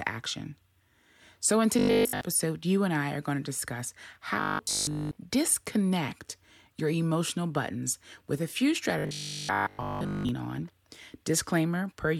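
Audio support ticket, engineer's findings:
Robotic sound from repeated short buffers: audio delivery likely starved, playback looping the last 20 ms and skipping real audio. The result is a rigid metallic 50 Hz buzz. It occurs at 1.79–2.21 s, before "you and I are"; 4.41–5.19 s, after "are going to discuss", partly buzzed; and 8.99–10.29 s, after "buttons with a few".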